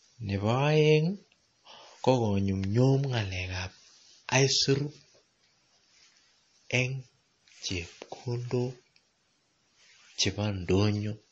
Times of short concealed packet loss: none

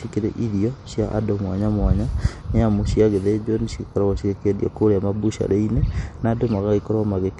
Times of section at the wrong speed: none

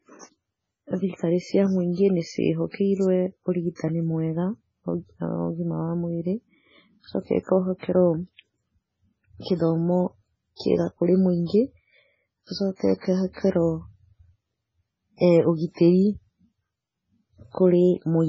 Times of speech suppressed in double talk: none

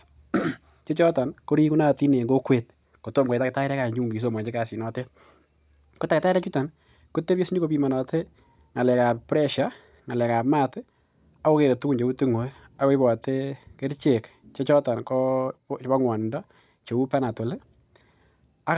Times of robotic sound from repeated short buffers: none

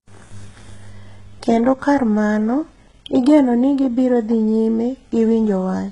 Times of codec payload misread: none

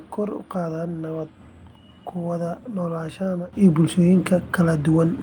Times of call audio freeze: none

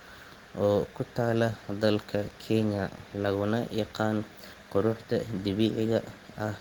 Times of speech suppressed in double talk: none

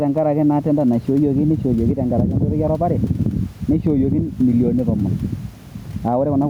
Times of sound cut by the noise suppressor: none

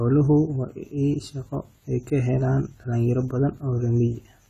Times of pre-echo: none

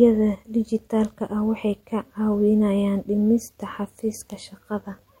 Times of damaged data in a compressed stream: none

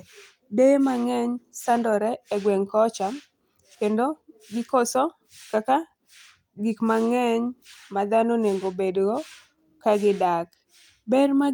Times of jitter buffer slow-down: none

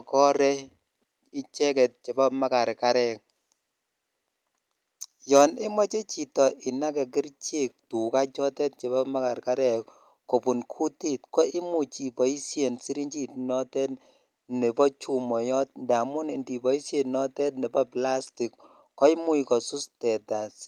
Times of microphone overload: 5.36-5.42

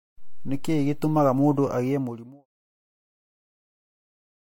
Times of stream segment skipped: none

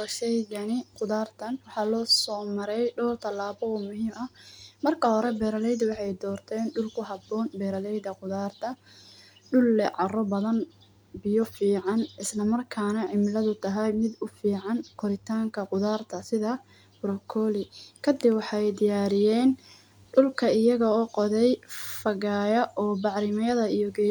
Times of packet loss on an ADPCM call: none

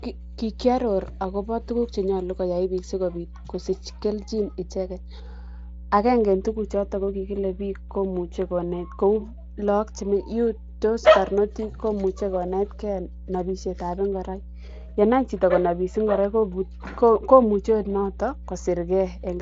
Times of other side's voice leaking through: none

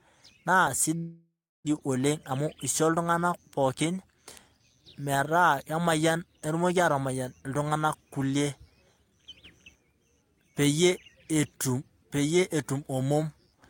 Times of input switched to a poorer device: none

